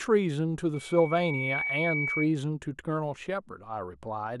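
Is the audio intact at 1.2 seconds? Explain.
No. At 1.2 seconds a loudspeaker feedback squeal is sounding. It runs from 0.74 to 2.29 s. A microphone is picking up the loudspeaker it feeds. At one frequency the loop gain tops one, so that frequency keeps growing on its own. Here it is a steady tone at 2.3 kHz. It swells over roughly the first 0.7 seconds and reaches about the level of the speech itself. It then holds as a piercing whistle.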